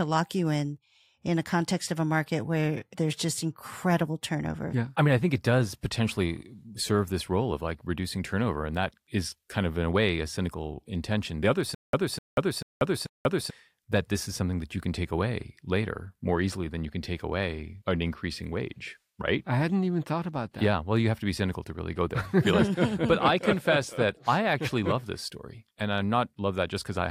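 From 11.75 to 13.50 s there is a stutter with silent gaps: a 253 ms burst plays four times, each followed by 186 ms of digital silence, every 439 ms. The likely cause is a stalled stream replaying its last fragment at each retry, losing that stretch of audio.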